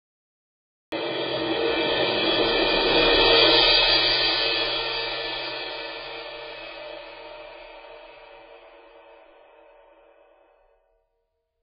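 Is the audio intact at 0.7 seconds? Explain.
No. At 0.7 s the clip is still in digital silence. This is a cut-off start: the recording began late, so nothing is heard until the music appears abruptly mid-sound at 0.92 s. The waveform shows a flat line, and the spectrogram is blank until a hard vertical edge, with no attack or fade. From that point on, the sound is watery and swirly with nothing above 5 kHz, most likely heavy MP3 compression at a bitrate around 16 kbps. On a spectrogram this shows as a flat ceiling at 5 kHz with flickering holes below it.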